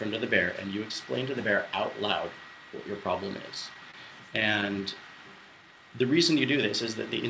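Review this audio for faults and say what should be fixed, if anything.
A short stall from a late packet sits at 3.91 to 3.96 s, in audio that has already passed through a G.722 call path with nothing above 8 kHz. A packet missed its playout time, the jitter buffer ran dry, and the receiver stretched the last sound by 25 ms before resuming from the same point, so overall delay grows by 25 ms. Unlike lost-packet concealment, nothing is skipped; the sound is only held, with a faint buzz or dip. Giving the jitter buffer a little more headroom, or adapting it to the network's arrival jitter, would prevent this.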